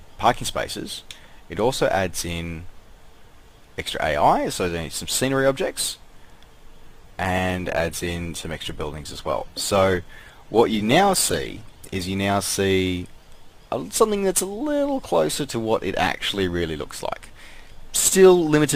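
A call bitrate drop runs from 6.85 to 12.19 s. The sound turns coarse and muffled, which fits the encoder falling from about 64 kbps to 15 kbps.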